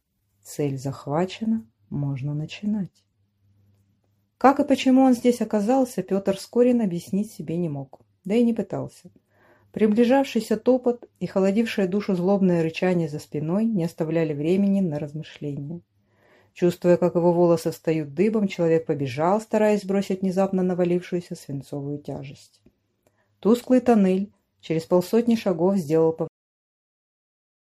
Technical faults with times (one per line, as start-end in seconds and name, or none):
26.28-27.79 cut-off end